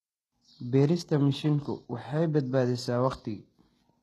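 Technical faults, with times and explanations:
Throughout, HE-AAC compression: the speech's upper range sounds bright but synthetic, with gritty, lispy s sounds and nothing above 12.3 kHz. This is likely a low-bitrate codec, around 16 kbps, rebuilding treble from copied lower bands whose harmonics don't align.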